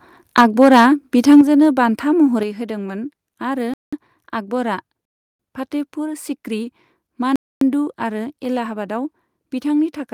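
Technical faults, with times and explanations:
0.37–0.83 s and 1.30–1.41 s, microphone overload: peaks flatten into harsh crackle, likely from input gain pushing about 6 dB, then about 2 dB, past the converter's ceiling, clipping a small then a larger share of samples.
0.41 s, 1.41 s and 2.43 s, microphone volume stepped down: level drops abruptly by about 2, 6 and 5 dB, likely the call software cutting input gain after loud or clipped input.
3.74–3.93 s, 5.05–5.39 s and 7.36–7.61 s, block of digital silence: sound cuts to silence for 189, 341 and 256 ms; the middle gap fits a 16,384-sample buffer left unfilled.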